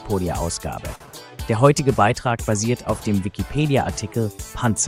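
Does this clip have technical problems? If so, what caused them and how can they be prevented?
Yes. A short stall from a late packet runs from about 0.95 to 1.16 s. A packet was not there when it was due, so the jitter buffer ran dry. The receiver held the last sound for about 49 ms until the packet turned up and then resumed where it had stopped, so nothing is lost, but that sound lingers too long with a faint buzz or dip. Prevention: a slightly deeper or adaptive jitter buffer would absorb a 49 ms delay jump.

Short concealed packet loss falls inside that stretch, from 1.06 to 1.09 s. About 20 ms of audio never reached the decoder in time, and the receiver covered the gap by continuing the preceding sound briefly before blending back into the real signal. The result is a quick smear or wobble. Prevention: forward error correction or redundant packets, plus a steadier network path, would let the missing audio be recovered instead of guessed.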